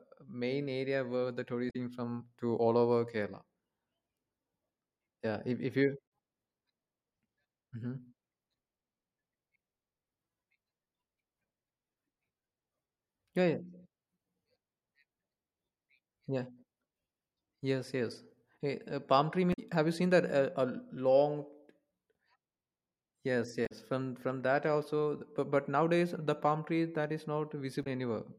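Damaged data in a compressed stream breaks into the speech five times: at 1.69 to 1.76 s, 6.04 to 6.06 s, 19.50 to 19.59 s, 23.65 to 23.72 s and 27.83 to 27.87 s. Each is brief, between about 24 and 88 ms. Corrupted bytes in the encoded stream make the decoder misread those frames. It loses sync and hunts for the next valid frame header. Each break is a short glitch in the speech.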